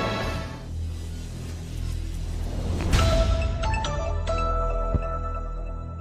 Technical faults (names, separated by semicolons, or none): loud pop